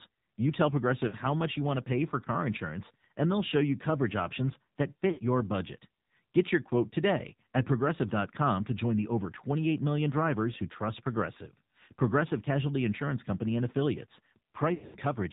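The whole clip is speech passed through the AMR narrowband mobile codec. Nothing above 4 kHz survives, so the sound is dull and boxy. The codec models the vocal tract and drives it with a pitch predictor and a few pulses per 5 ms. The damage is plainly audible as a buzzy, synthetic voice. That fits a low mode of about 7.4 kbps.

Lost AMR speech frames follow. Frames failed their checksum, so the decoder repeated the last good pitch and vocal tract settings at falling gain. At 1.08 s, about 40 ms is lost, which fits two frames. It is a brief dip or warble. At 5.12 s, about 60 ms goes, which fits three frames. The worst is from 14.74 to 14.96 s. There, 180 ms is lost across a 200 ms stretch, with a longest run of 100 ms. The voice is drawn out and fades toward silence, then returns weak or rough.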